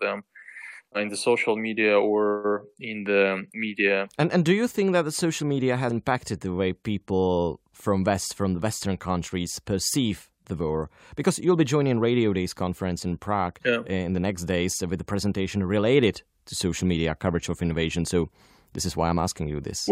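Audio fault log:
Nothing stood out on listening to the speech in this recording.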